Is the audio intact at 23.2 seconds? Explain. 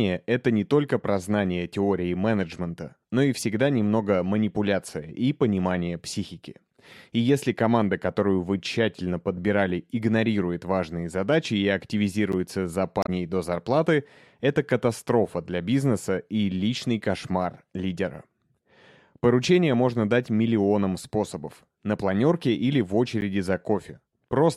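No. At 23.21 s, just after "планерке или в", there is a block of digital silence about 10 ms long. The speech cuts out abruptly and snaps back without any fade. At that length the gap comes across as a tick rather than a pause.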